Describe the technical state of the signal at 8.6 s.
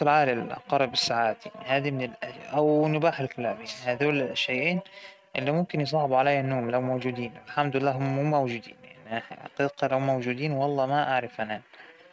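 At 8.6 s the speech is intact, with no fault, and the only thing audible is the call path's coding, whose band limit leaves nothing above about 8 kHz, which fits a G.722 wideband codec.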